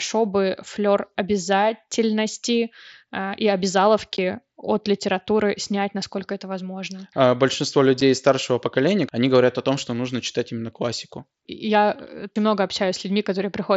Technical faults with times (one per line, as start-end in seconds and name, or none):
4.17 unconcealed Bluetooth headset packet loss
8.01 unconcealed Bluetooth headset packet loss